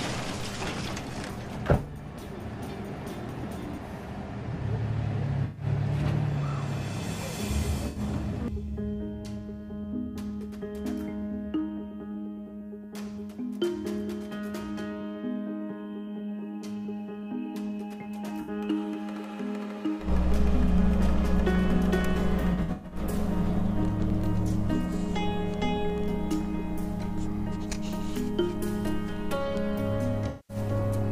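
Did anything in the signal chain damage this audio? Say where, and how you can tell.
Yes, this is AAC frame loss with concealment at the codec stage. There are smeared, phasey patches at 5.44–5.65 s, 7.88–8.00 s, 18.41–18.50 s, 22.40–22.99 s (scattered dropouts, longest about 100 ms) and 30.28–30.56 s, where the decoder rebuilt missing frames from the last good spectrum.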